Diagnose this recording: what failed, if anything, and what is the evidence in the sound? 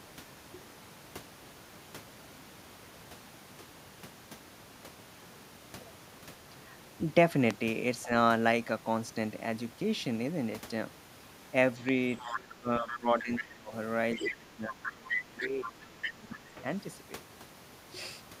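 Two loud pops land at 7.51 s and 11.89 s, each a single sharp hit well above the speech, with the talk carrying on underneath. That points to the analogue wiring stage, most likely a voltage step from a plug, switch or static discharge that the downstream circuitry shapes into a click.

Speech suppressed in double talk shows up in call processing. There's a brief dip of roughly 10 dB around 8.04 to 8.11 s, then a long stretch from 12.27 to 16.61 s where the talker sinks by as much as 20 dB. The likely cause is the echo canceller failing to separate near and far talkers and ducking both.

The other side's voice leaking through, also a call-processing fault, comes in at 12.19 to 12.32 s, 12.88 to 13.44 s and 14.16 to 16.37 s. It gets louder each time, ending only a few dB under the talker. Likely the echo canceller isn't fully removing the loudspeaker signal from the mic.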